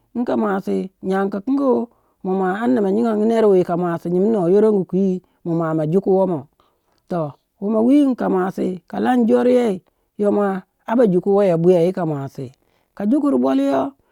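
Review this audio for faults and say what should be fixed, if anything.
A single bit error spike sits at 10.89 s, right after "lan joryei yo mua". It is one sample, peaking at about -26 dBFS. A flipped bit threw the value off by a power of two, and it snapped back on the next sample. It is heard as one sharp tick unrelated to the speech. On the waveform it shows as a lone vertical needle, and on a spectrogram as a thin full-height stripe. Prevent it with error-checked memory and digital links.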